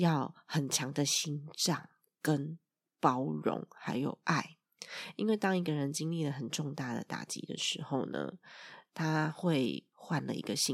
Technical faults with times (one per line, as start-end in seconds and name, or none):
none